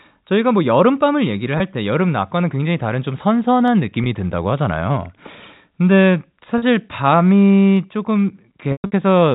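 Packet loss with pitch repetition at 1.58 s and again at 4.04 s leaves a 20 ms gap each time, the size of one lost packet. The receiver fills it by repeating the last pitch period, so the sound briefly holds on a faintly buzzy tone before carrying on.

Dropped samples at 3.68 s produce a single sharp click. The waveform jumps abruptly forward, likely because a handful of samples, well under a millisecond, went missing. No audible sound is removed, only a thin spike of discontinuity.

Packet loss with pitch repetition at 6.58 s covers 40 ms, matching two consecutive lost packets. The repeated pitch period stretches longer here and starts fading.

Dropped samples at 7.77 s give another isolated click of the same kind, a tiny forward jump in the waveform lasting a fraction of a millisecond.

Packet loss with pitch repetition from 8.72 to 8.92 s is the heaviest. About 180 ms is lost across 200 ms, including a 120 ms run. 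That run is too long for the repeated pitch period to bridge: it fades into silence, and the sound returns through short cross-fades, all heard through the narrow telephone band of G.711 coding.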